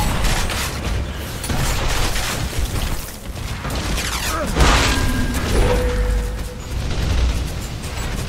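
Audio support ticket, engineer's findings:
No fault found on listening: no dropouts, clipping, glitches or timing disturbances anywhere in the audio, nothing to attribute to capture, processing or playback.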